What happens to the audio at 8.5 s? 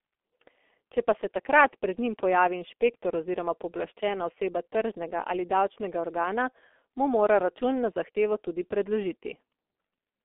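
At 8.5 s, as throughout, heavy G.723.1 codec damage muffles the speech above about 3.7 kHz, and the slow, coarse frame-by-frame modelling, consistent with roughly 6 kbit/s, adds a hoarse, smeared texture that plain band-limiting would not.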